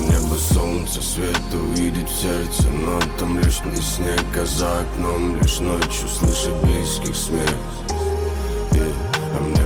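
At 3.63 s the sound lurches forward with no gap: about half a second simply vanishes and the two sides butt together almost seamlessly. This is a skip ahead, where a stretch of audio was discarded, likely by an overflowing jitter buffer, while later audio already waited.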